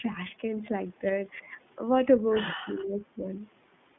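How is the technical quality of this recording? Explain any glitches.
The recording has a narrowband, codec-coloured sound throughout, with one brief packet-loss glitch and two stretches where the speech ducks in level.

Throughout the clip, the speech is confined to a telephone band of roughly 150 Hz to 3.5 kHz and has a plainly audible rough, slightly synthetic edge. This is the iLBC codec. It codes each frame's excitation independently of the frame before, trading smoothness for robustness. The character fits iLBC's 20 ms frame mode at about 15 kbps. Above the 3.5 kHz line edge, nothing survives.

From 0.46 to 0.48 s there is a short held, faintly buzzy smear in place of fresh speech, fitting a single lost iLBC frame. The decoder covered the gap by repeating the last pitch cycle blended with noise. Because iLBC frames stand alone, the very next frame decodes cleanly, so the speech snaps back at once and the glitch is confined to that 20 ms.

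From 1.41 to 1.51 s and again from 2.65 to 3.25 s, the speech drops sharply in level, by around 15 dB at its deepest. This is likely speech suppressed in double talk. When both ends of a call talk at once, the echo canceller struggles to tell the near talker from loudspeaker echo and attenuates everything. That produces these momentary dips, the longer one lasting about half a second.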